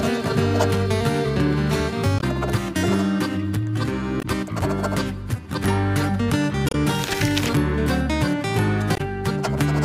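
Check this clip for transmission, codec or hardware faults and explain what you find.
Damaged data in the compressed stream causes four short glitches: 2.17–2.24 s, 4.19–4.25 s, 6.69–6.75 s and 8.94–9.01 s. Corrupted bytes make the decoder misread frames and lose sync. Each lasts about 60 ms and is heard as a brief blip.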